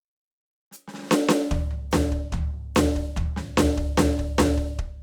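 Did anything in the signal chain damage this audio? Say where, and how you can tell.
No, nothing in this music stood out on listening as damage from any stage of the signal chain.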